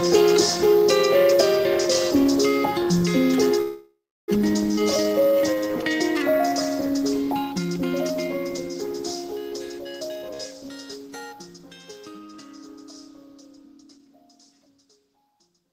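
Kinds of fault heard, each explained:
Call audio freeze: From 3.61 to 4.30 s the sound stalls. The last bit gets stretched into a fading buzz that drops to silence for about a third of a second. That's likely packets held up and the jitter buffer running dry. When it resumes, nothing's missing; it's just pushed back about 0.67 s.
Skip ahead: There are two jumps, one at 4.76 s and one around 10.32 to 10.36 s. Playback leaps forward with barely any gap, losing about a fifth of a second the first time and about a tenth the second. The two sides butt straight together.
Jitter buffer slow-down: Right after the first jump, from 4.79 to 6.50 s, things drag along at about 89% speed with no change in pitch. The receiver keeps repeating tiny pitch-period slices to rebuild its reserve, adding roughly 0.19 s, so sounds come out drawn out.
Jitter buffer speed-up: Between 9.85 and 10.23 s the audio rushes at about 119% speed, pitch unchanged. 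The buffer's got more queued than it wants, so it trims short pitch-period chunks back to back. That shaves off around 70 ms and gives a hurried feel just before the second skip.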